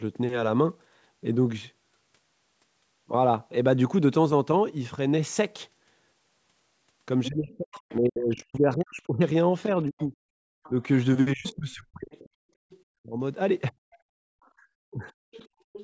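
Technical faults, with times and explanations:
7.25–7.95 s, other side's voice leaking through: a second voice sits about 20 dB under the talker. This is likely far-end speech played on the device's loudspeaker that the echo canceller did not fully remove from the microphone before sending it on.
7.28–13.77 s, speech suppressed in double talk: for about three seconds in total, spread across this span, the talker's voice dips and breaks up, at worst by around 40 dB, while the far side is also heard. The canceller likely could not tell the overlapping talker from echo and pulled both down.
9.99–12.82 s, other side's voice leaking through: faint far-end speech trails beneath the audio at roughly 30 dB below the talker. It is likely residual loudspeaker echo that the canceller left in the microphone path while both sides overlapped.
14.05–15.66 s, background gated by the echo canceller: the room sound drops away, by about 40 dB, for roughly 0.7 s in total, then returns. 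While the loudspeaker was playing, the canceller clamped the microphone down hard and took the background with it until it released.
14.45–15.84 s, other side's voice leaking through: a second voice runs to the end of the clip at about 20 dB below the talker. This is likely loudspeaker playback from the far end that the echo canceller did not suppress before transmission.
14.91–15.08 s, speech suppressed in double talk: the talker's voice briefly sags by around 15 dB for about 0.15 s as the far side overlaps. The canceller likely treated the simultaneous speech as echo and turned it down.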